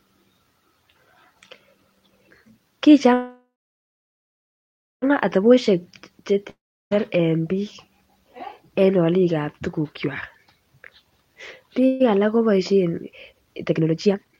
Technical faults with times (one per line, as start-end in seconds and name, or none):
3.13-5.04 call audio freeze
6.50-6.93 long network dropout
11.86-12.02 call audio freeze
13.11-14.39 jitter buffer speed-up